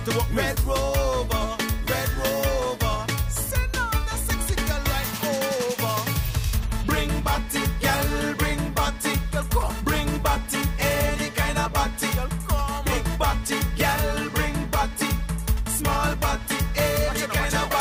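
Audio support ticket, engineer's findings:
No faults found on listening; nothing audible to attribute to any component in the chain, so no action needed on this ticket.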